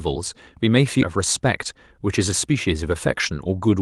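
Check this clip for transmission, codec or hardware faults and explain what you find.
Two faults show up in this speech clip: one skip ahead and a longer stretch of jitter buffer speed-up, both heard through an Opus-style call path whose content stops near 12 kHz.

Skip ahead, at about 1.01 to 1.03 s: roughly 0.7 s of queued speech was dropped and the two sides were joined with no fill. The speech lurches forward mid-flow. A waveform shows an abrupt splice, and spectrogram formants jump discontinuously at one vertical line.

Jitter buffer speed-up, from 1.13 to 3.50 s: to shed excess delay, the receiver repeatedly cut pitch-period slices, removing about a fifth of a second in total. Speech runs 108% fast at unchanged pitch and sounds hurried. Spectrogram harmonics stay level while syllables appear compressed in time.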